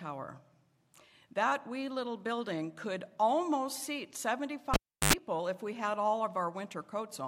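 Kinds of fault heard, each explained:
Cable pulled and plugged in: a live signal lead is pulled from its socket and pushed back in while audio is running. At 4.74 s a pop marks the break, and the sound drops to near silence for roughly 0.35 s. As the plug goes back in, the tip touches first and picks up a burst of 50 Hz mains buzz lasting about 89 ms. A second pop follows, and the sound returns at 5.13 s.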